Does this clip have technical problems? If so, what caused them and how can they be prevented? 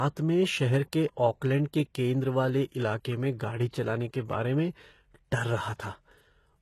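Yes. Throughout the speech there's plainly audible codec damage, with nothing above 12.3 kHz, and the likely cause is HE-AAC compression at a very low bitrate, something like 16 kbps. The treble is rebuilt from copied lower bands, so sibilants come out gritty and lispy. Encoding at a higher bitrate, or with plain AAC, would avoid it.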